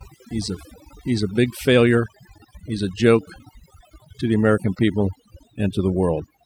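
Overdone noise removal runs through the whole of this speech clip, from start to finish. A noise reduction stage was pushed too hard: it drives individual frequency bands down or out whenever their level sits close to what it takes to be the noise floor, and the quieter parts of the voice fall below that line and vanish with the noise. The gaps between phrases collapse to near silence sprinkled with twinkling specks.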